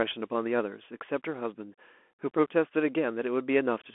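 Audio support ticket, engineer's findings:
Bluetooth CVSD headset codec damage, whole clip. Speech band-limited to roughly 250 Hz–3.4 kHz, nothing above 3.8 kHz. Granular hiss under speech, scratchy s sounds, distortion on loud high content. One-bit delta modulation, adaptive step too slow for fast transients. Sound points to a 64 kbps narrowband headset link.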